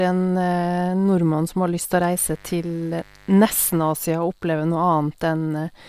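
From 2.02 to 3.93 s, a raspy mains buzz sits under the speech. Switching spikes add 50 Hz harmonics, fairly quiet, well below the voice.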